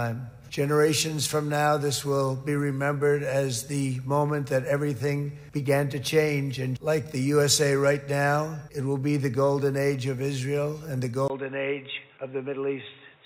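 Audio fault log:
11.28–13.26 s, input switched to a poorer device: after a brief 20 ms gap, the sound turns dull and boxy, with nothing above 3.8 kHz, and a new, faint background hiss appears. The level stays the same. That gap and the fresh noise floor point to a likely change of microphone rather than a filter or codec narrowing the band.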